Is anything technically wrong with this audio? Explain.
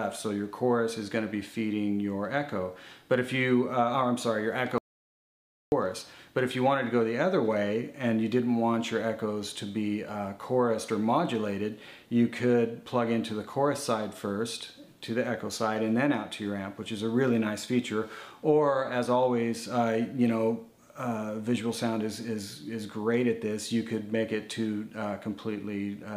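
Yes. From 4.78 to 5.72 s there is an audio dropout to silence lasting about 0.94 s, likely from a lost input link. The sound cuts off abruptly to total silence with no room tone, then resumes mid-flow. It appears as a flat line on the waveform and a blank gap on the spectrogram.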